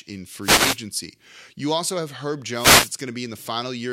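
Wireless microphone noise hits at 0.41–0.78 s and 2.53–2.94 s: the FM radio link fades as reflections cancel, so receiver static swishes up over the speech.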